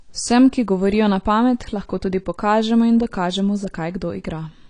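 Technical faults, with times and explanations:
Throughout, AAC compression: the speech sounds dull and smeared, with nothing above 10.1 kHz. Likely a low-bitrate AAC-LC encode, around 32 kbps, quantising coarsely.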